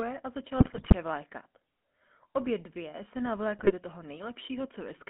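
Speech carried through the GSM full-rate codec, band-limited to roughly 200 Hz to 3.4 kHz, with the buzzy, gravelly roughness of pulse-excited vocal-tract coding, which fits a 13 kbps full-rate stream. GSM bit errors break the speech into squawks and gargling from 0.58 to 0.94 s and again from 3.58 to 3.72 s, where corrupted filter, pitch and gain parameters distort the spectrum and level frame by frame.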